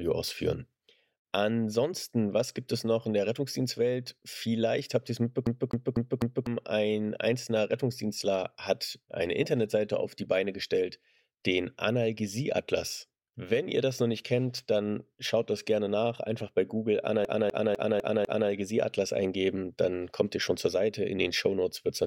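At 5.46 to 6.47 s and again at 17.25 to 18.50 s, a CD stuck on one turn replays the same 250 ms slice four, then five times, muting briefly at each laser jump.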